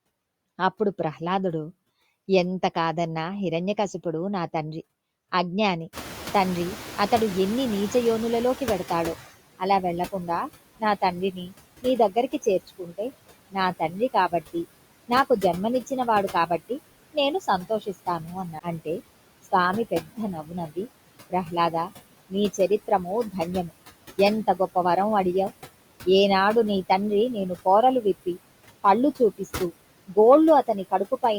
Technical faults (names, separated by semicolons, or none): noise suppressor artifacts; noise suppressor catching up; speech cut by the noise suppressor; CD skip